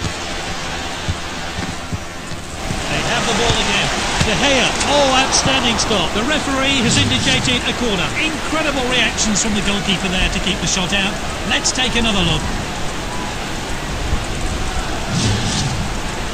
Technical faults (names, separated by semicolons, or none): channel delay (comb filtering)